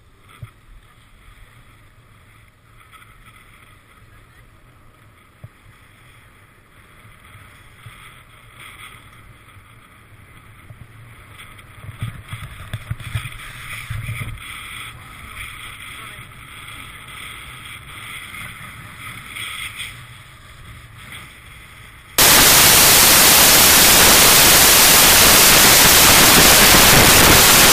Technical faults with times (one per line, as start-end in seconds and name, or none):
22.18-27.73 samples built from the wrong bytes